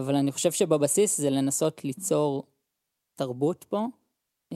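No technical faults can be heard anywhere in the recording. Nothing in the audio calls for comment at any point from beginning to end.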